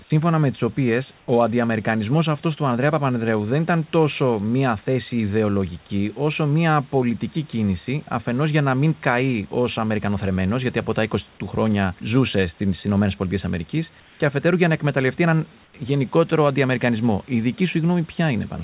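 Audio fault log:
1.18–1.28 s, 14.0–14.2 s, 15.64–15.74 s, comfort noise in place of the background: three brief patches (100, 200 and 100 ms) where the real room noise, about 33 dB under the speech, turns into flat, featureless noise about 2, 3 and 6 dB quieter. They fall after "σύμφωνα με τις οποίες", before "αφετέρου για να εκμεταλλευτεί", and after "για να εκμεταλλευτεί έναν". Likely the sender's voice detector pausing transmission while the receiver fills in synthetic noise, all heard through the call path's 4 kHz top end.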